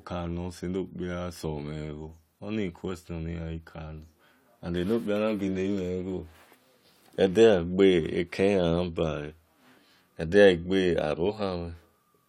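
No technical faults can be heard anywhere in the recording.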